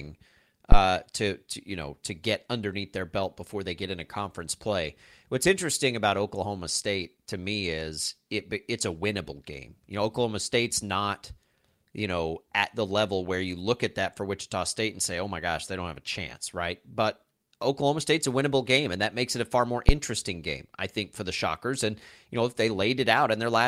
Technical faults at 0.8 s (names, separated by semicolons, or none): phantom power thump